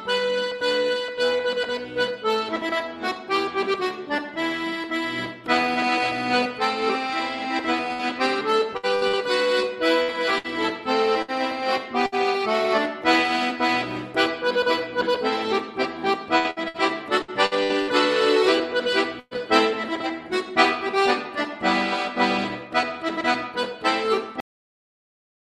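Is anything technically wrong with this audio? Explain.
Yes, there are three kinds of fault.

From 7.93 to 12.15 s there is repeated packet loss (robotic sound): eight short dropouts, none longer than 63 ms, each patched by stretching the preceding sound. About 11% of the stretch is synthesised, so it sounds choppy. Unlike a single burst, the holes keep recurring.

A second spell of repeated packet loss runs from 16.38 to 17.91 s. Seven gaps are concealed, covering about 27% of that span, so the robotic chop is denser here.

At 19.20 s a burst of packet loss removes about 120 ms in one go. The receiver extends the last sound as a held, fading tone, then falls silent for roughly 30 ms before the audio resumes further on. It is one longer hole, not a stutter.

The audio has a cut-off end at 24.40 s. It stops mid-sound and drops straight to digital silence with no decay, because the final buffers were never played.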